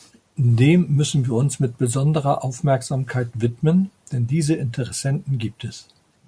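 No technical faults can be heard anywhere in the speech recording.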